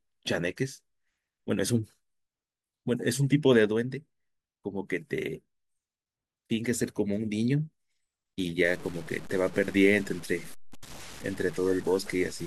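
From 8.65 s to the end of the clip at 12.47 s, the speech takes on a coarse, grainy distortion that rises and falls with the voice, consistent with low bit depth without dither. The likely cause is truncation to very few bits, which fits roughly a 6-bit word. The rounding error tracks the signal, sitting only about 20 dB below it, so quiet syllables turn gritty and the softest tails sputter or cut to silence.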